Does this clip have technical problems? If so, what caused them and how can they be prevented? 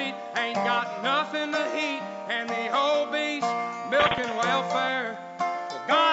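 No, no technical problems can be heard in this clip.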